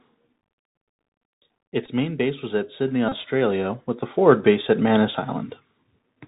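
Throughout the recording the speech passes through a Bluetooth CVSD headset codec, which fits a 64 kbps link. Each sample is reduced to a single up-or-down bit with a step size that has to keep adapting, so nothing above 4 kHz survives. The damage is plainly audible: s sounds come out scratchy, loud bright moments distort because the step cannot keep up, and a grainy hiss sits under the voice.

At 1.86 to 1.89 s, just before "main base was at", the headset lost about 15 ms of audio and the chip decoded the previous packet's bits again. This Bluetooth headset packet repeat fits about four packets. Because the same short chunk recurs every 3.75 ms, it briefly turns into a buzz near 267 Hz. A second packet repeat at 3.09 to 3.12 s covers about 30 ms, which fits roughly eight packets, and produces the same buzzing stutter.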